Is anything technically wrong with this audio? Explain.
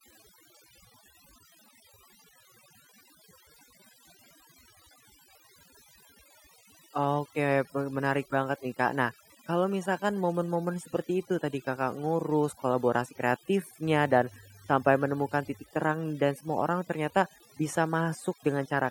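Yes, the speech has two faults. Overdone noise removal runs through the whole clip: the reduction was set so aggressively that frequency bands close to its noise estimate are cut deep or to nothing, taking quiet speech detail along. The background sits at near silence with twinkling specks. Those flickering specks are what distinguish it from plain low-pass dullness or a lossy codec's smearing.

Mains hum appears from 13.86 to 15.63 s as a steady 50 Hz tone with some low harmonics, roughly 25 dB below the speech. Power-line current is leaking into the signal, likely through a ground loop or nearby transformer. Its fixed pitch and brief, steady presence separate it from rumble or handling noise.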